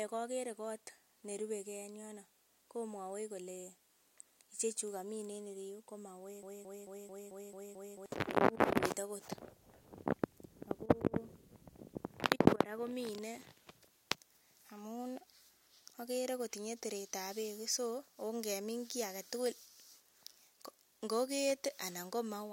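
A broken-record loop runs from 6.43 to 8.06 s in this speech. A fragment about 0.22 s long plays seven times in a row, each pass identical and butted against the last, so the sound stutters in place instead of moving forward. The likely cause is a player, encoder or stream that stalled and kept resending the last piece it held, and the speech that belonged in that stretch is gone.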